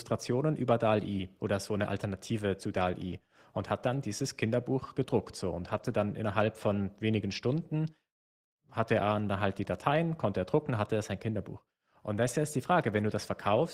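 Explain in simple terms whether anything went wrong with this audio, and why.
Yes, twice in this speech clip a stretch of audio went missing in transit and was patched with a backup copy: a lost packet rebuilt from error correction. It happens from 5.69 to 5.91 s, right after "gedruckt so und", and again from 7.31 to 7.37 s, just after "dann innerhalb von wenigen". The backup is a rougher, lower-quality copy, so those moments sound grainy and noisier. Unlike an ordinary dropout, there is no silence or stutter; the sound keeps flowing, just briefly degraded.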